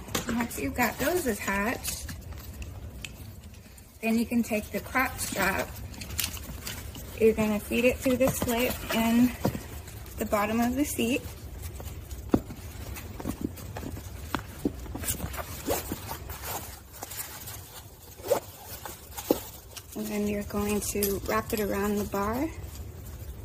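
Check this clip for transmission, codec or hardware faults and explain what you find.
I found nothing in this clip that needs explaining.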